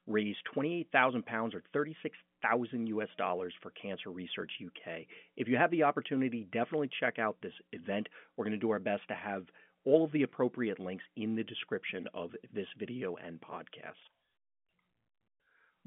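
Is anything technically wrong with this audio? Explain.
No, the speech is carried over an ordinary telephone line that fits 64 kbps G.711 A-law coding, with a band of roughly 150 Hz to 3.4 kHz, nothing above about 3.7 kHz, and at most faint coding traces, all of which is normal for that format.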